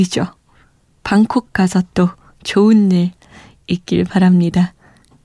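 No technical faults can be heard at any point in the speech.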